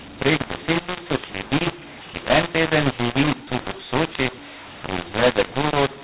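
A mu-law and A-law mix-up runs through the whole clip. The speech was coded with A-law but decoded as mu-law, so sample levels are scrambled. Loud and soft parts come out wrongly scaled, the speech sounds harsh and distorted, and the pauses fill with noise instead of silence. The 4 kHz telephone bandwidth of the G.711 coding itself comes through.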